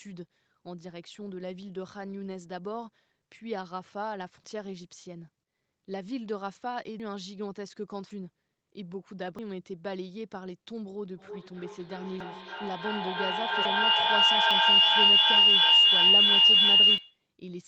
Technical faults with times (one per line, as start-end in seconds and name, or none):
4.44 dropped buffer (overrun)
7.00 dropped buffer (overrun)
8.11 dropped buffer (overrun)
9.39 dropped buffer (overrun)
11.17-17.28 feedback howl
12.20 dropped buffer (overrun)
13.65 dropped buffer (overrun)
14.51 dropped buffer (overrun)
16.98 dropped buffer (overrun)